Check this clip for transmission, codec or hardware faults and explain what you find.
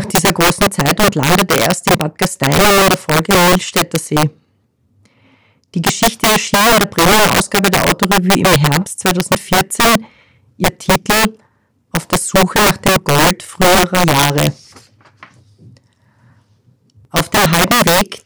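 There is one fault, integer overflow, present throughout the speech. The signal is driven about 9 dB past full scale, and with no limiting, the roughly 7 percent of samples above the limit wrap to the opposite sign, producing violent cracks on loud syllables.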